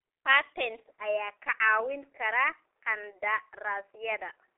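G.723.1 codec, throughout the speech: nothing reaches above about 3.7 kHz, and the lower edge sits near 300 Hz, the narrow band of a telephone line. The damage is heavy, with the hoarse, smeared quality of a coder that models the voice in 30 ms chunks at a very low data rate, which fits roughly 6.3 kbit/s. Consonants lose their edges, and the voice sounds muffled and rough.

Input switched to a poorer device, from 0.92 s to the end: the band narrows further, so nothing above about 3 kHz survives and the voice turns duller and boxier. There is no gap at the changeover and no clear jump in loudness, but a faint new noise floor appears far beneath the speech. This is likely the recording input moving to a lower-grade microphone or a headset's call mode.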